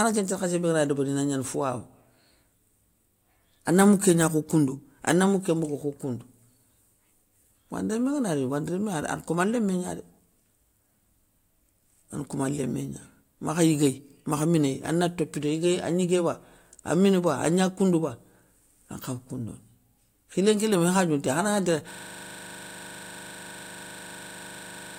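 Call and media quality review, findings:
System hang loop, 21.91 s to end of clip. Symptom: the speech abruptly stops progressing and a single 40 ms slice of audio repeats exactly, about 77 times, giving a steady 25 Hz buzz. Probable component: host or audio driver stalled while the output hardware kept replaying its ring buffer. Buffer length fits roughly 40 ms. No recovery before the clip ends.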